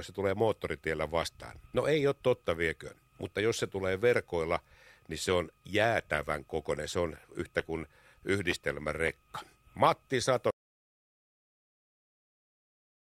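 At 10.51 s the speech cuts off abruptly into an audio dropout to silence. The gap lasts about 2.5 s, to the end of the clip. It is silent with no room tone. The input was likely lost while recording continued.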